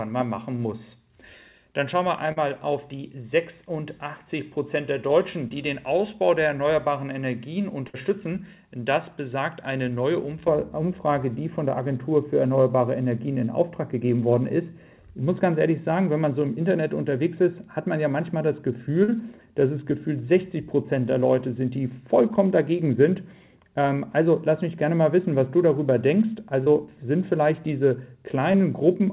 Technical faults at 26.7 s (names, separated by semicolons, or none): de-emphasis applied wrongly; short concealed packet loss